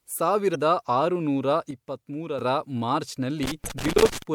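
At 0.51 to 0.56 s a brief glitch marks damaged data in the compressed stream: the decoder misreads corrupted frames and resynchronises, unlike random crackle. From 1.71 to 2.39 s the speech and background noise drop together by about 7 dB, then return. This sudden gain jump, unramped, is likely a digital gain setting switching abruptly, not fading. From 3.43 to 4.22 s an irregular burst of scratchy loose connector crackle chops the signal as a worn contact makes and breaks. Within it, at 3.65 to 3.69 s, there is a second corrupted-stream glitch.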